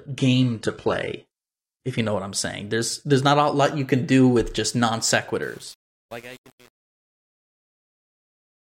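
From 0.0 to 2.0 s, up to "you know what I'm", the speech has the dull, smeared quality of an adaptive stream starting at a low bitrate. The player opened on a very lean version to start quickly, so the treble is largely synthesised, nothing sits above about 11.8 kHz, and codec artefacts are prominent. The sound fits a parametric low-rate codec near 16 kbit/s. At 2.0 s it switches abruptly, with no gap, to a much cleaner stream consistent with roughly 96 kbit/s.

After "do with just non" at 5.43 s, truncation distortion on the fade sets in and continues to the end at 8.61 s. From 5.46 s the fade stage is discarding low-order bits without dither. The resolution fits about 7 bits. As the level drops, the waveform collapses into coarse steps, so the tail turns gritty instead of tapering cleanly.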